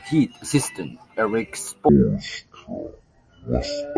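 From 1.89 s to the end, the speech suddenly drops a full octave, about 12 semitones, and runs at half speed, sounding deep, drawn-out and sluggish. This is a wrong sample rate fault: the samples are being played back at roughly half the rate they were captured at, with no conversion in between. The drop fits 44.1 kHz material played at about 22 kHz, which slows the timing and lowers the pitch together by the same factor.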